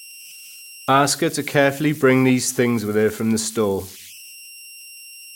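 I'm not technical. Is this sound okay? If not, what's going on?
No. The converter that turned this speech into digital form has converter idle tones. Without a small amount of added randomizing noise, it falls into repeating patterns whenever the sound gets quiet, and those patterns produce a thin whistle, here pitched high at around 3 kHz. You can hear it throughout the clip, most clearly in the pauses between phrases, with a grainy hiss under the softer parts of the speech.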